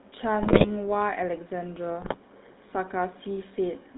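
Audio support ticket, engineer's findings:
GSM full-rate codec, whole clip. Buzzy, gravelly roughness on all speech; band limited to about 150 Hz to 3.7 kHz. Vocal-tract filter driven by a coarse, regularly spaced pulse excitation, decimated by three, smears fine detail into buzz. Damage plainly audible, consistent with the 13 kbps full-rate coder.

GSM bit errors, 0.42 to 0.71 s and 2.02 to 2.16 s. Squawks, pops and gargling breakups. Corrupted filter, pitch and gain parameters reach the decoder, so individual frames get a bent spectrum or a level spike. The error density points to a weak radio link at around 5 percent, slightly worse in the second burst.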